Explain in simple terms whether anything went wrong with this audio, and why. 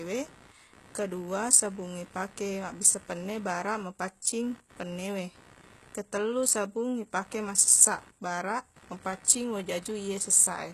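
Three problems can be heard in this speech recording.

Computer activity noise runs through the whole clip: a buzzing pulse of roughly 70 repeats per second, sitting well below the speech. It comes from the computer's electrical load disturbing the audio circuit's shared ground, so it rises and falls with the machine's activity, not with the talking.

The treble is plainly damaged throughout, with nothing above 12.3 kHz, and the top end sounds gritty or metallic rather than natural. The likely cause is HE-AAC compression, which stores only the lower frequencies and fakes the treble by copying lower bands upward.

Pre-echo appears at 4.22 s, where a short hiss lasting about 32 ms arrives just before a sharp attack. The codec spreads its noise across a whole block, so noise meant for the loud moment leaks into the quiet moment before it and smears the onset.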